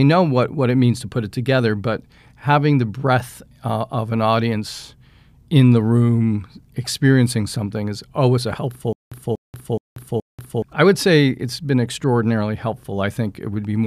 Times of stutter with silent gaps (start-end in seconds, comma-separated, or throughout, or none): 8.93-10.62